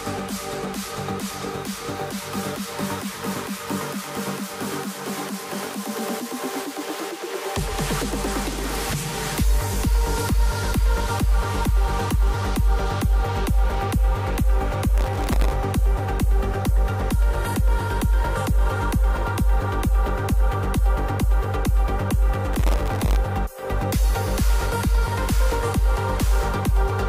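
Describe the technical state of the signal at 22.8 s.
At 22.8 s the processor is overloaded and can't finish its audio buffers on time. From 22.53 to 23.16 s it misses deadline after deadline, with buffers well under a millisecond long and around seventy of them dropped. Each miss leaves a short hole of silence with hard edges. Packed this closely, the holes form processor overload crackle, a gritty, tearing burst riding on the sound that stops once the load eases.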